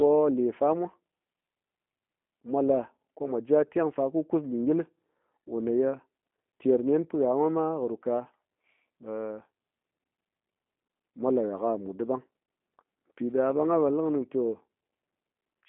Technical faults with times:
0.00-15.68 G.729 codec

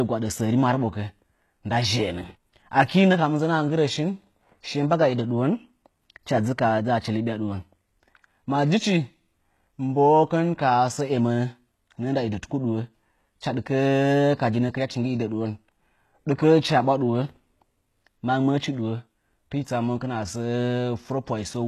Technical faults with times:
0.00-21.68 HE-AAC compression

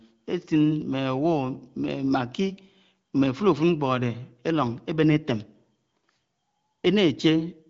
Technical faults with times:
none

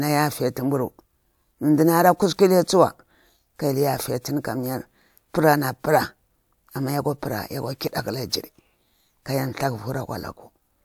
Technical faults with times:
none

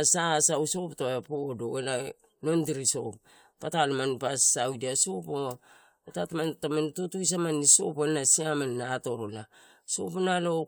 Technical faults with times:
none

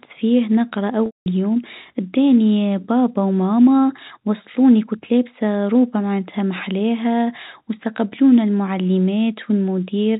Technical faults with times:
1.06-1.26 packet loss with pitch repetition

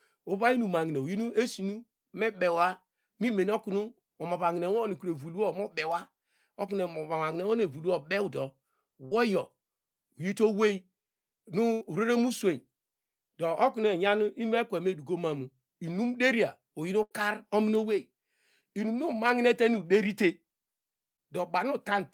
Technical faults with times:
9.05-9.13 burst of packet loss
11.73-11.83 burst of packet loss
17.03-17.13 burst of packet loss
18.61-18.64 short concealed packet loss
21.16-21.20 short concealed packet loss

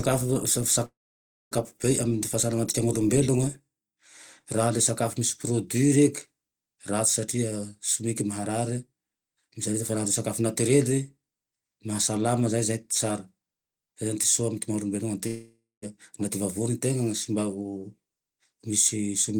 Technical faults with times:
0.85-1.53 long network dropout
15.27-15.84 long network dropout

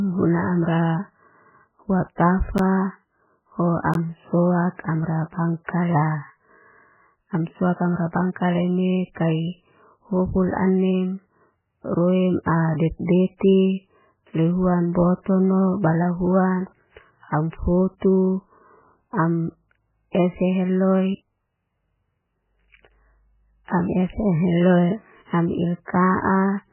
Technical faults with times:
0.00-26.72 MP3 compression
2.58 block of digital silence
3.94 block of digital silence
5.65-5.68 pre-echo
9.14-9.16 pre-echo

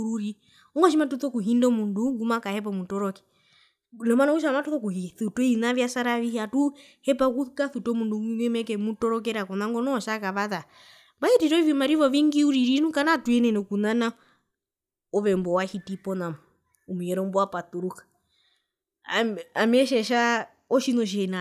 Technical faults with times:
none

